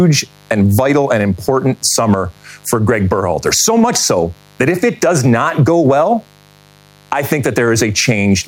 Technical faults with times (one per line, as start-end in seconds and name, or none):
0.00-8.47 mains buzz
0.00-8.47 gain pumping